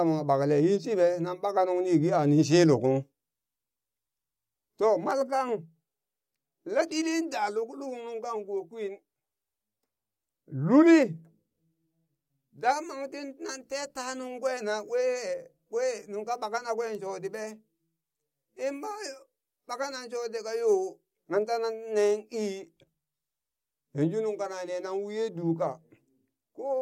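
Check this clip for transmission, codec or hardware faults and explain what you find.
Nothing in the speech points to a transmission, codec or hardware fault.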